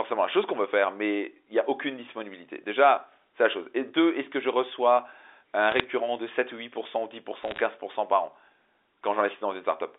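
Speech over a G.711 telephone line, band-limited to about 300 Hz to 3.6 kHz, with bit errors on a digital phone line. Flipped bits, a fraction of a percent, corrupt single samples, producing bursts of sharp ticks and crackle from 5.72 to 5.84 s, just after "que je reçois un", and from 7.43 to 7.60 s, just before "par an".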